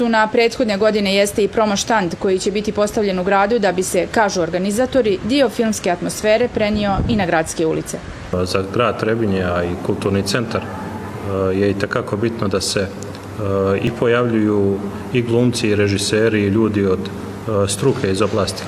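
At 7.90 s and again at 13.87 s there's a small skip, which is overlap between stream segments. Two neighbouring 2-second segments claimed overlapping time, so the player discarded about 31 ms and then 37 ms of real audio, and the waveform jumps across the gap.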